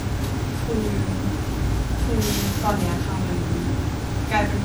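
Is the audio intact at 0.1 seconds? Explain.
No. At 0.1 seconds the speech already carries generation loss, which runs through the whole clip. The sound is swirly, smeared and hollow, and the onsets of sounds blur. It is worse than a single lossy pass would leave. The likely cause is repeated MP3 encoding, around ten passes, at a rate that fits 96 kbit/s. Each pass quantises again on a shifted frame grid. The noise and spectral gaps from each pass pile up.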